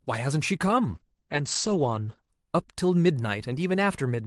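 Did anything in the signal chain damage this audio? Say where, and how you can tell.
Yes. From 0.94 s to 2.37 s the speech turns rough and watery, and its upper range goes dull: the top end, which reaches about 12 kHz elsewhere, stops near 8 kHz for roughly 1.4 s before clarity returns. That is a call bitrate drop at the codec and network stage. The bandwidth estimate fell, so the Opus encoder coded more coarsely and narrowed its audio band, which fits a fall from around 32 kbps to about 10 kbps.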